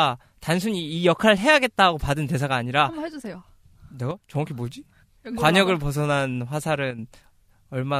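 One channel drops out from 4.11 to 4.35 s, and again, more briefly, from 6.91 to 6.99 s. Both times the speech suddenly sinks by about 6 dB and then snaps back to full level. The cause is likely the loss of one side of the stereo feed. When the two channels are summed to mono, material shared by both loses half its contribution, and anything carried only on the missing side vanishes for the duration.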